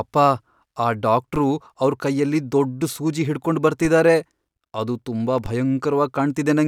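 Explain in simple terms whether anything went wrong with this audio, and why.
Yes, something went wrong. At 1.36, 3.85 and 5.46 seconds a DC step shifts the baseline of the recording up or down all at once, and the speech carries on unchanged. Each jump sounds like a short, dull thump, and the shift then fades away smoothly. It isn't a dropout, because no sound goes missing. It also isn't a mouth click, which is sharp and thin rather than low and dull.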